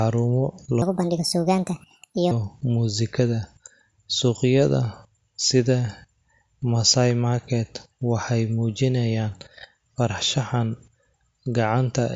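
From 0.82 to 2.31 s the speech runs fast and high, the mark of a wrong sample rate: audio captured at a rate that fits 16 kHz is being played as if it were 24 kHz, with no conversion between them. Everything speeds up by 1.5 times and the pitch rises by about 7 semitones in lockstep. That coupling tells it apart from a time-stretch or a pitch-shift, where tempo and pitch move independently.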